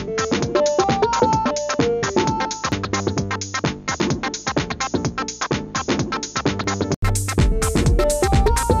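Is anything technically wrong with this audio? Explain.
Yes. From the start until 7.02 s the sound is dull and boxy, roughly 5 dB quieter, and with a noise floor about 50 dB down. An 80 ms gap then precedes fuller sound. This is likely an input switched to a poorer device, a narrower-band microphone taken over and later released.

Jumps forward occur at 1.2 s, 2.72 s, 4.0 s and 6.64 s, skipping around 40 ms at the first two and around 20 ms at the last two. Each is likely a dropped buffer (overrun), where unread samples were overwritten and the neighbouring audio spliced together.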